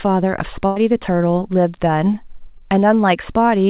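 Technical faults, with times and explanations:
0.66 to 0.78 s, burst of packet loss: The speech stops moving forward for about a tenth of a second. The last sound before the break is drawn out and sinks in level, then the talker resumes a little further on, as if a short piece were snipped out. Roughly 100 ms of audio never arrived in time, so the receiver continued the final fragment it had and faded it down. The missing stretch itself cannot be recovered, so the words jump.
2.58 to 2.62 s, short concealed packet loss: A quick smear or wobble passes through the speech, brief enough to sound like a slight slur. About 20 ms of the call failed to reach the decoder, and the receiver bridged the hole by extending the preceding sound and blending back into the real signal. The join is audible because the patch only imitates what was there, heard here over the narrowband call audio that holds nothing above 4 kHz.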